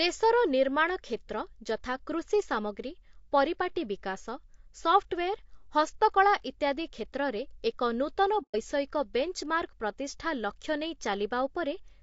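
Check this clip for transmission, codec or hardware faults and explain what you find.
Two faults are audible: coding damage across the whole clip, and one brief dropout.

Low-delay AAC compression runs throughout. The speech sounds rough and grainy. Noise fills the gaps between the voice's harmonics, and the top band sounds thin and synthetic. This is likely AAC-ELD, the low-delay codec used for video calls. Its short frames resolve pitch harmonics poorly and spend more bits. At a low rate, which fits about 32 kbps, the damage is plain.

AAC frame loss with muting occurs from 8.42 to 8.56 s, right after "ଏକ ନୂତନ". The decoder lost several consecutive frames, which fits about four. It zeroed their spectrum. The overlapping windows fade the sound out and back in. The result is a soft-edged hole of about 0.14 s in the speech.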